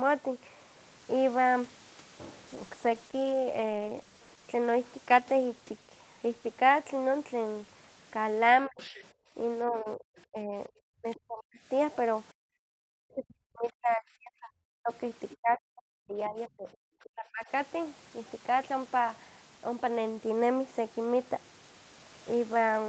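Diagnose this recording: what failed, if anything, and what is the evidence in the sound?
At the codec stage, a call bitrate drop pushed Opus from 32 kbps down to 11 kbps between 2.53 and 7.63 s, staying at the floor for about 1.3 s. With so few bits the speech turns coarse and watery, losing detail until the rate climbs back.

In the call's echo canceller, speech suppressed in double talk shows from 8.66 to 11.59 s and 12.64 to 17.46 s, likely because both sides spoke together. The talker dips by roughly 40 dB in pieces, about a second in the first span and three in the second.

The same canceller let the other side's voice leak through, likely from loudspeaker echo left in the microphone. A faint second voice appears at 8.79 to 10.24 s, 11.15 to 11.2 s and 15.3 to 17.09 s, sitting some 20 to 30 dB under the speech.

Background gated by the echo canceller occurs from 9.13 to 9.34 s. The canceller clamped the microphone hard while the loudspeaker played, so the room tone drops by about 25 dB for roughly 200 ms, then returns once the suppression releases.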